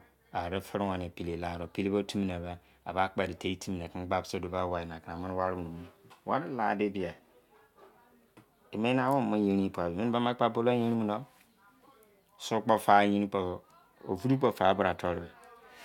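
Nothing in this speech recording points to a technical fault at any point.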